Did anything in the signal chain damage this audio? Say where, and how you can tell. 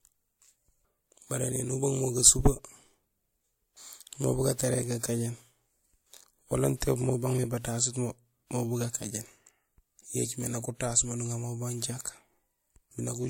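Yes, at the codec stage, throughout the speech: the audio has nothing above 16.6 kHz, and two different kinds of compression smearing are heard together. That mix points to transcoding between lossy codecs, likely an MP3 encode re-encoded to WMA, unlike a single low-bitrate pass.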